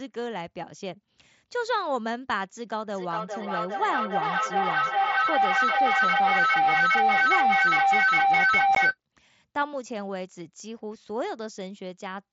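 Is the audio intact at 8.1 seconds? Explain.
No. A feedback howl runs from 2.87 to 8.98 s. The loop gains level each trip, building a tone near 700 Hz, with repeats about every 400 ms, about 9 dB above the speech.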